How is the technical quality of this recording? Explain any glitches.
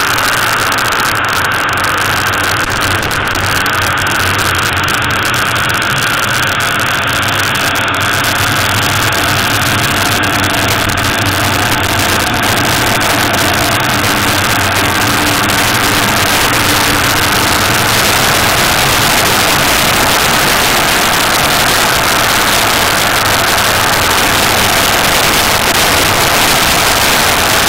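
The technical quality is poor, with two separate faults.

Throughout the recording, the loudest moments break into violent, hard cracks, far harsher than ordinary clipping. This is integer overflow. The signal is driven roughly 8 dB past the top of the integer range. Instead of being held at the limit, each peak that crosses it wraps around to the opposite sign and jumps across the full scale in an instant. Only a few percent of the samples go over, but every one of them produces a sharp snap.

There are also three irregular bursts of scratchy crackle: from 2.65 to 3.48 s, from 10.83 to 12.39 s, and from 25.41 to 25.82 s. These are loose connector crackle. A worn or dirty contact in the signal path keeps making and breaking as it shifts, so the audio is chopped on and off rapidly, and any DC on the line adds pops. The longest burst, around 11 s, lasts about 1.6 s.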